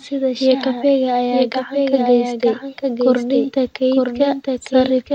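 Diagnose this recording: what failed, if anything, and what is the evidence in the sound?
The speech is doubled throughout as a doubled audio track. A second full-band copy trails the original by about a second, sitting a few decibels lower. It's clean, with no decay or room colour, so it's not an acoustic echo. It reads as two copies out of step rather than a reflection. The likely culprit is the same signal being captured again through a slower path at the driver or routing stage, or an edit that left both copies in.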